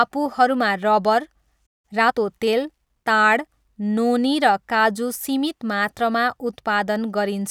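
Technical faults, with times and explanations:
1.66–1.85 s, playback stall: the speech drops into silence for about 0.17 s mid-flow, then carries on, likely because the player ran short of data or its thread was held up.
1.85–2.19 s, time-compressed catch-up: the speech sounds rushed, 1.5 times normal speed at unchanged pitch, as small cross-faded pieces are cut out to clear the backlog.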